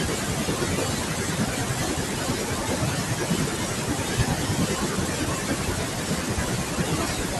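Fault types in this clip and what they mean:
Noise suppressor artifacts, throughout: The suppressor judges each frequency band frame by frame and pulls down whatever it reads as steady noise. The room noise, sitting about 17 dB under the speech, sinks in the gaps and swells back beneath the talking.
Speech cut by the noise suppressor, 0.00 to 7.39 s: The suppressor mistakes parts of the speech itself for background and turns them down along with the noise. This happens across nearly the whole clip, not in one isolated spot. At its deepest the loss is about 18 dB, so soft consonants, word endings and quieter stretches come through swallowed or faint, as if clipped off by the same suppressor that is clearing the room sound.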